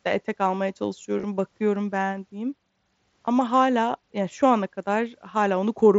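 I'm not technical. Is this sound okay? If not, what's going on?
No. Around 1.17 to 1.24 seconds and 3.25 to 3.28 seconds the speech briefly turns buzzy: concealed Bluetooth headset packet loss, where the receiving device patched lost moments by repeating recent sound.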